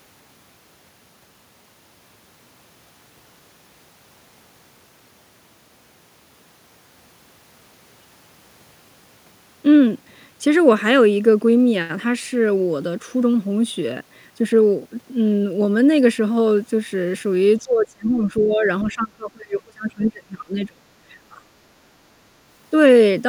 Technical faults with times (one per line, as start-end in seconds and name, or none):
17.59-20.83 speech suppressed in double talk
18.81-18.90 other side's voice leaking through
21.29-21.52 speech suppressed in double talk